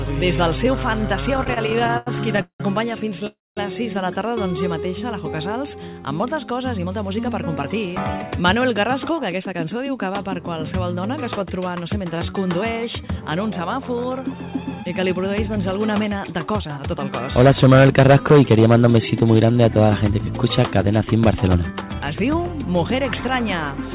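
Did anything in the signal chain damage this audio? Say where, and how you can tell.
Yes. Repeated stalls (stutter), 1.34–2.62 s, in the network and jitter buffer: fourteen short gaps, the longest 181 ms, are filled by stretching the last sound, so the audio drags.

Call audio freeze, 3.27–3.59 s: the sound holds, fades, then sits silent about 210 ms before resuming. The likely cause is delayed packets emptying the jitter buffer.

Jitter buffer speed-up at 6.78–9.71 s (106%), 14.21–15.01 s (108%) and 21.47–22.35 s (111%): pitch-period slices are trimmed to shed backlog, so the audio hurries.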